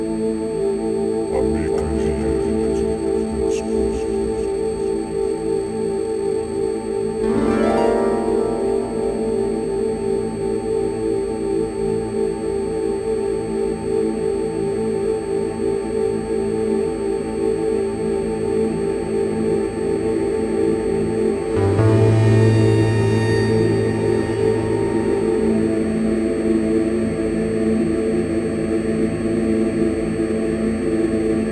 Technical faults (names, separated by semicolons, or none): aliasing